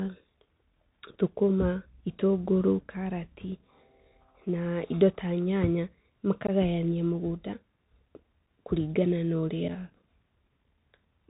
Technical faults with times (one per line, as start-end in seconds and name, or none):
0.00-11.30 Bluetooth CVSD headset codec
6.47-6.50 unconcealed Bluetooth headset packet loss
8.47 unconcealed Bluetooth headset packet loss
9.68 unconcealed Bluetooth headset packet loss